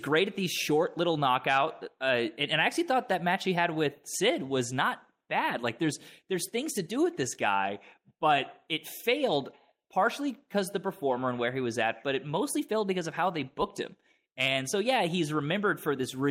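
No audible faults come up anywhere in the recording.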